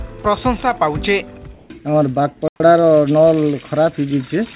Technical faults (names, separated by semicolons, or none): comfort noise in place of the background; playback stall; time-compressed catch-up